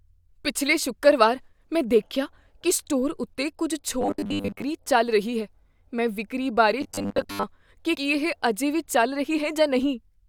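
Speech, with two stretches of robotic sound from repeated short buffers, from 4.01 to 4.62 s (after "ਕੀ ਸਟੋਰ ਉੱਤੇ ਕੁੱਝ", before "ਚੱਲ ਰਹੀ ਹੈ ਮੈਂ") and from 6.81 to 7.43 s (after "ਹੈ ਮੈਂ ਵਿਕਰੀ ਬਾਰੇ", before "ਕੀ ਕੀ"). There the voice becomes a rigid metallic buzz at 100 Hz, likely from starved playback looping the last 10 ms chunk and covering most of the sound. A spectrogram would show evenly spaced, flat harmonic stripes at 100 Hz multiples, and the waveform a period repeating every 10 ms. At 7.94 s compressed frames are skipped. Roughly five frames of 21.3 ms drop out, so about a tenth of a second of audio is lost. On a spectrogram this shows as a narrow vertical seam where the content jumps ahead.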